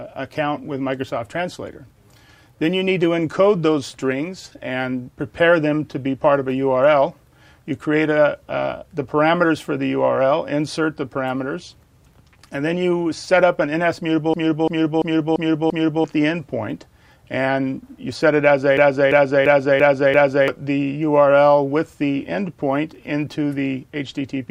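From 14.34 to 16.04 s, and again from 18.77 to 20.48 s, one 341 ms fragment repeats exactly five times at 2.93 per second, and about a second and a half of audio is lost each time. This is a system hang loop: the system froze while the sound hardware kept replaying the same ring buffer, which fits a 16384-sample buffer.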